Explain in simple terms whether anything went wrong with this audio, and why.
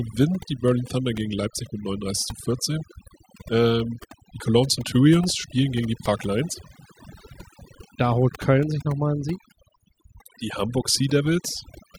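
Throughout the clip, the gaps between phrases drop in level and break up into twinkling specks. That is overdone noise removal: a noise-cleaning tool was set too strong on this recording. It switched off any pitch region that resembled the background noise, and in doing so it also removed the quieter parts of the voice, leaving those glittering leftovers behind.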